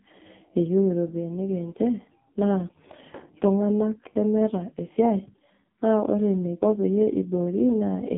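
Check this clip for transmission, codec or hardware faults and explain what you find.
The clip has one fault, present for its whole length: AMR narrowband mobile codec damage. The speech was squeezed through AMR-NB, the 2G/3G mobile coder, and the heavy artefacts point to one of its lowest modes, around 5 kbps. The coder rebuilds the voice from a vocal-tract filter and a handful of excitation pulses per short subframe, and at so few bits that model is coarse. The result sounds buzzy and synthetic. The line band runs roughly 150 Hz to 3.6 kHz, with nothing at all above 3.7 kHz, giving the thin, boxed-in telephone tone.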